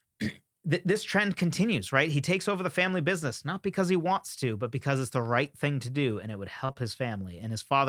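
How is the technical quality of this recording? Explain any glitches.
The recording has a handful of brief network glitches, all in the last part of the speech.

Lost packet rebuilt from error correction, at 5.45, 6.69 and 6.77 s: each time one 20 ms packet was lost, and the decoder played the low-bitrate copy carried in the next packet. There is no gap, just a short rougher, noisier patch. Unlike concealment, real content is still present.

Short concealed packet loss, from 6.65 to 6.71 s and 6.73 to 6.77 s: about 40 ms and then 20 ms never arrived. The receiver extrapolated the preceding sound and blended back into the real audio, leaving a brief smear or wobble. Here the content is guessed rather than coarsely preserved.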